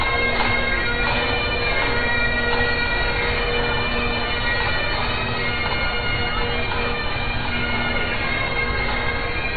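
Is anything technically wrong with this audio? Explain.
Yes. Throughout the clip, the damage points to heavy compression, likely MP3 compression, at a very low bitrate, somewhere around 23 kbps. With so few bits, the encoder discards everything above 4.6 kHz and drops weaker frequency components that come and go between frames. Nothing above 4.6 kHz is audible, so the audio sounds dull and muffled, with an unstable, watery swirl and smeared attacks that are plainly audible from start to finish.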